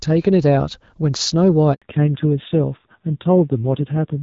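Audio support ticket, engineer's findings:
Handover gap, 1.74 to 1.82 s: 80 ms dropout, sound fades fast to silence, then resumes. Network handover; no speech frames delivered while the link switched, so that stretch of audio is lost rather than concealed.

Fallback to narrowband, 1.82 s to end: abrupt loss of everything above 4 kHz right after the gap; duller, rougher tone than the lightly coded HD Voice (AMR-WB, 12.65 kbit/s) before it. Codec renegotiation to AMR-NB; the coarse texture fits a low rate near 5.9 kbit/s.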